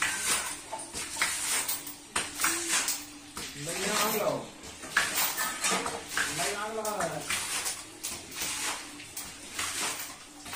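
At 3.44 s the sound slows by about 6% and drops about 110 cents, then snaps back at 4.77 s. From 7.14 s to 8.12 s it speeds up by about 6% and rises about 104 cents. Both are likely a drift correction step, where clock-matching software changed playback rate abruptly.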